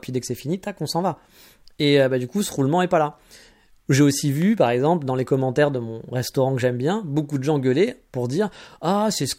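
At 4.42 s a single loud pop cuts into the speech. It lasts only until about 4.44 s. The pop stands out as a sharp, hard click, a few decibels louder than the speech around it. The speech carries on underneath without a break. A pop like this comes from a sudden voltage step or pulse entering the signal path. The likely cause here is a brief electrical glitch, such as a plug, switch or static discharge.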